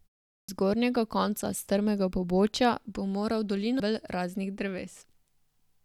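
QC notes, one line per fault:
0.40–0.49 s, clipped start after a pause: speech begins abruptly out of 0.4 s of silence, with about 85 ms of its onset swallowed while the output device wakes. Unlike muted pauses, which fade cleanly and return in time, this cuts into sound.
3.79 s, stream segment skipped: the speech jumps ahead with a small blip, without a silent gap or repeated material. The likely cause is a stream segment that failed to load, with the player moving on to the next. This differs from a dropout, where the timeline pauses rather than skipping forward.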